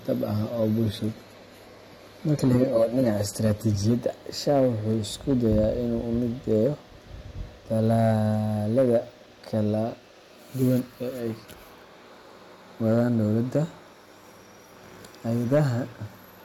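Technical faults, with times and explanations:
Throughout, hard clipping: brief crackle on the loudest peaks, where the signal overshoots the limit by about 5 dB and a small fraction of samples are cut flat.
0.0–4.0 s, adaptive stream starting at a low bitrate: duller, more artefact-laden sound with nothing above 14.2 kHz, then a sudden, gapless improvement, consistent with a step from 32 to 96 kbit/s AAC.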